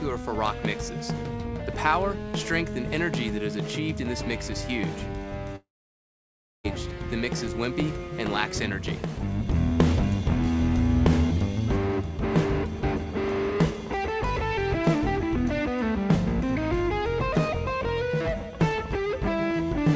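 From 5.56 to 6.67 s the audio breaks off. A brief fading buzz carries the last sound, then nearly a second of silence follows before it resumes with that stretch missing, likely a long network dropout. Across the clip nothing is heard above 8 kHz, consistent with a G.722 call path.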